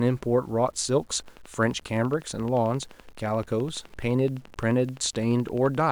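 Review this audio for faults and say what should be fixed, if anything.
Throughout, the speech was likely reduced to about 8 bits and rounded without dither, so quiet passages turn gritty, with grainy distortion roughly 35 dB below the speech. Requantize only with dither, and keep at least 16 bits.

From 1.20 to 5.84 s, a train of clicks, likely interference, ticks steadily at 11.7 per second, about fifty pulses, each nearly as loud as the speech. Shield and ground the recording chain.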